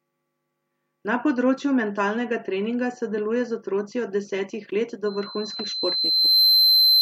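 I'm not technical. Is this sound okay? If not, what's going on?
No. From 5.05 s to the end there is loudspeaker feedback squeal. A microphone was picking up the sound from a loudspeaker it was feeding, creating a loop. At one pitch, about 4.1 kHz, a high whistle, each trip around the loop came back a little louder than before. So that tone grows by itself over roughly a second and a half until it's louder than the speech, and it's still going when the clip ends.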